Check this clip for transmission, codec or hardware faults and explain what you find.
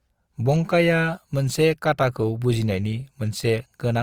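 One codec fault runs through the whole clip. Opus compression, throughout: starved bands are refilled with noise or folded content, leaving the speech grainy and rough at full bandwidth, likely Opus's CELT mode at about 24 kbps.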